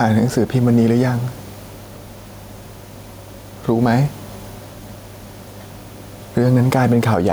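Speech with gain pumping throughout: the input gain is likely set far too high, so a fast limiter keeps clamping down on each loud syllable. The room noise sits about 36 dB below the speech, and the gain swings by around 5 dB under every loud passage, leaving the speech squashed and flat in level.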